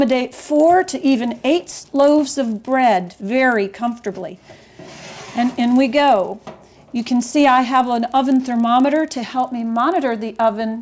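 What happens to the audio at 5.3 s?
At 5.3 s the resampler is restarting on every block, as it does across the whole clip. Each 40 ms block is converted on its own, so at its edges the filter has no real neighbouring samples to work from and leaves a small error at every boundary. The result is a steady ticking at 25 Hz, close to a low buzz, heard only where there is signal. The conversion appears to be a downsampling step, consistent with 24 kHz to 16 kHz.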